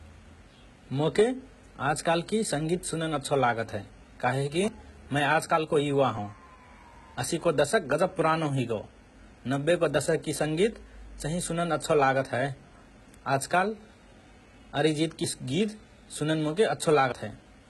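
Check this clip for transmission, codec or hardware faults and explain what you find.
Two kinds of fault are present: codec damage throughout, and two skips.

HE-AAC compression, likely: only the lower spectrum is coded and the treble rebuilt from copied bands, fitting roughly 16 kbps. The treble is heavily gritty and metallic, with nothing above 11.8 kHz.

Dropped buffer (overrun), likely: at 4.68 s and 17.12 s, samples were overwritten before being read. The audio jumps ahead, losing around 40 ms and 70 ms respectively.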